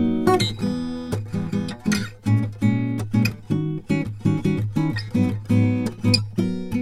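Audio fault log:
0.61–6.81 s, one channel drops out: the music abruptly falls about 6 dB and stays quieter to the end. The likely cause is one stereo channel going silent, so the mono sum keeps just half the shared content.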